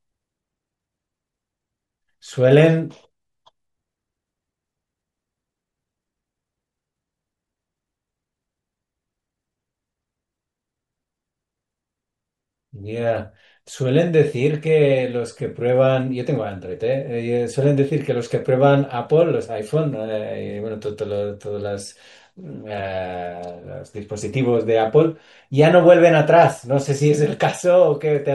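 No technical faults can be heard anywhere in this speech recording, and the signal holds steady throughout without any disturbance to the sound.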